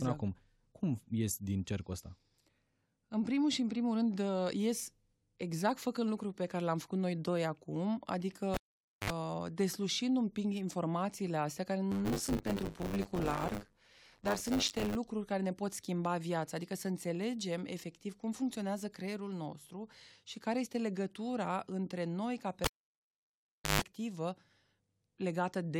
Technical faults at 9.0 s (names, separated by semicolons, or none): cable pulled and plugged in